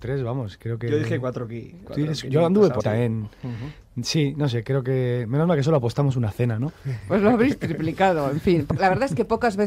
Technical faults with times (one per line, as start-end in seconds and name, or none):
2.79 compressed frames skipped